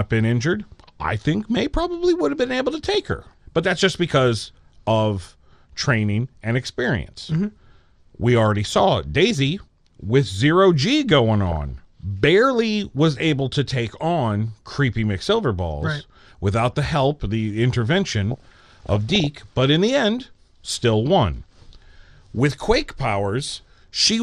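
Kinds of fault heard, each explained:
MP2 compression: The speech was likely coded with MPEG Layer II at a low rate, around 80 kbps. Starved of bits, its upper sub-bands switch off and the rest are coarsely quantised, so the whole clip sounds dull, with a plainly audible gurgling, granular roughness.
DAB burbling: Bit errors at under one percent slipped past error correction into the coded audio, corrupting samples and scale factors so single sub-bands jump in level. Blips of noise in single sub-bands sit over the speech at 2.94–3.33 s, 11.50–11.69 s and 18.30–19.27 s.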